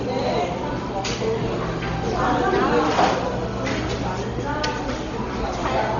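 A short recording of sounds carries heavy codec damage for its whole length, most likely from Dolby Digital compression at a very low rate, which fits about 32 kbps. Nothing survives above 6.9 kHz, so the sound is dull, and where the encoder gave frequency lines no detail of their own, they are refilled with noise, leaving a rough, fluttering haze around tonal parts. That noise-filled grain, rather than clean dullness, separates it from a simple low-pass filter.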